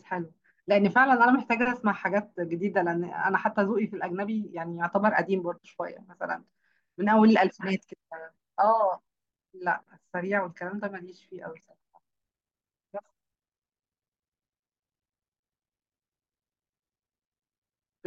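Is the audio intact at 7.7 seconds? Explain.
Yes, the speech at 7.7 seconds plays through intact, with no audible fault at that moment.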